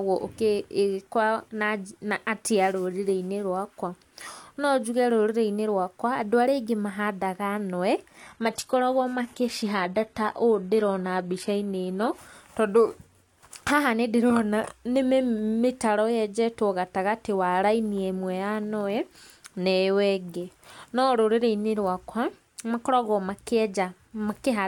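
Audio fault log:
8.18–12.18 s, adaptive stream at a lower bitrate: for four seconds the speech abruptly loses clarity with no gap on either side, as the player switches to a much leaner rendition of the stream and then back. The upper frequencies take on a hissy, synthetic sheen, and smeared, watery codec artefacts rise. This points to a jump from full-band AAC near 96 kbit/s down to HE-AAC near 20 kbit/s, where the treble is rebuilt from lower bands rather than actually coded.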